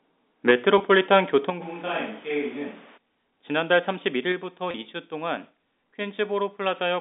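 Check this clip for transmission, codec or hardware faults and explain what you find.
Yes, there's a handful of faults across the roughly 7 seconds of speech, mostly level trouble on the capture side plus a couple of network dropouts. It's all sitting on a G.711 A-law telephone line, so everything is band-limited to roughly 250 Hz to 3.7 kHz.

From 0.48 to 0.51 s there's microphone overload. A peak runs about 5 dB past full scale, and around a tenth of the samples in that stretch get their tops sheared flat. That's likely the mic input gain set too hot, driving the converter into its ceiling. You hear it as a brief harsh, crackly edge on a loud syllable rather than a clean transient.

Right after that comes a microphone volume step-down, at 0.51 s (about -4 dB), then again at 1.5 s (about -6 dB) and 4.32 s (about -3 dB). The likely cause is the call software's automatic gain logic spotting the hot or clipped input and cutting the device volume in one jump. 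Voice and background noise drop together, abruptly, with no fade. The first one lands straight after the distorted peak, which is the giveaway.

There's packet loss with pitch repetition at 0.78 to 0.80 s (20 ms gone) and at 4.71 to 4.74 s (30 ms gone). The gap lengths fit two and three 10 ms packets. The receiver fills each hole by looping the last pitch cycle and fading it out. Because both losses are short, they come across as a momentary held, slightly buzzy note before normal audio resumes.

From 1.63 to 2.96 s there's a switch to a distant microphone. The sound suddenly turns roomy and hollow, the bass thins out, and the level sits roughly 5 dB lower. Background room noise rises to about 25 dB under the speech. The likely cause is the close mic's feed dropping out and a farther device, such as a camera mic, taking over. The jump back at 2.96 s is just as abrupt.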